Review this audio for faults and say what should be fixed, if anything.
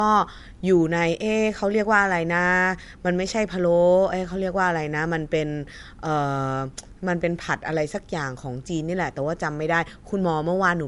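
Across the whole clip the speech sounds dull, with nothing above about 11.2 kHz and the artefacts of low-bitrate MP3 compression. This points to low-bitrate audio saved at a high bitrate: the recording was likely squeezed through a low-rate MP3 encode, around 64 kbit/s, then re-encoded as a large high-rate MP3. The second pass cannot restore anything the first pass destroyed, so the lost treble and artefacts remain. Source the original uncompressed or high-rate master and encode once from it, never from an existing low-rate file.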